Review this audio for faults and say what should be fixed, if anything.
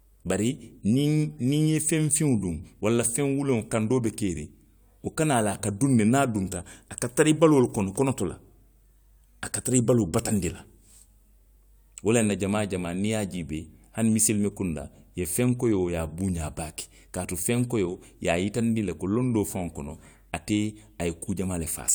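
No faults found in the speech recording, so nothing needs fixing.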